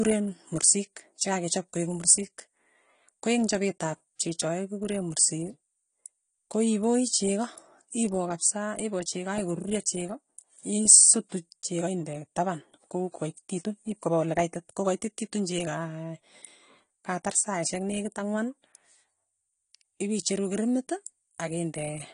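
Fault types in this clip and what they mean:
AAC compression: Throughout the speech, nothing is present above 10 kHz, so the top octave is missing and the sound is dull, with plainly audible smearing and a warbling, fizzy texture on sibilants and held vowels. The likely cause is lossy AAC-LC coding at a bitrate in the region of 32 kbps. The encoder quantises each frame's spectral lines coarsely against a masking model, cuts the highest band outright and leaves shifting gaps elsewhere.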